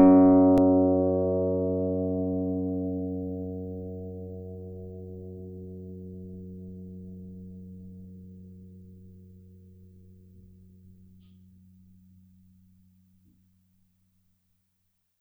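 At 0.58 s there's a repeated buffer in the music. New audio didn't turn up in time, so the device just played its last chunk over again. That chunk is tiny, about 1.45 ms, which fits a 64-sample buffer, and it plays one extra time, with a hard join at each edge. With a piece that small you don't hear a stutter, just a quick click, and the timeline slips by roughly a millisecond and a half.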